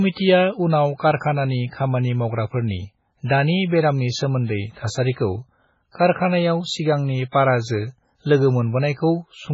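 From start to finish the speech has a watery, swirly quality. Nothing gets through above 7.6 kHz, so the top end sounds dull and boxed in, and the s sounds come out with a metallic chirp. That's likely MP3 compression, and heavy compression at that, consistent with a very low bitrate around 16 kbps. The encoder ran short of bits, chopped the treble at a fixed point, and kept dropping weaker frequency lines in and out between frames. That flickering is what gives it the swirl, and the attacks are smeared too.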